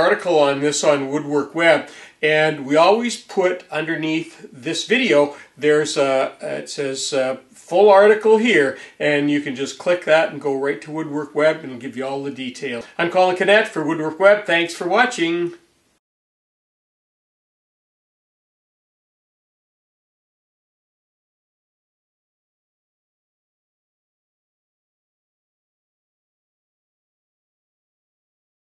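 No technical faults can be heard anywhere in this clip.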